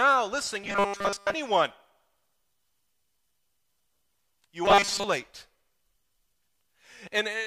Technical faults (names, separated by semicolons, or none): robotic sound from repeated short buffers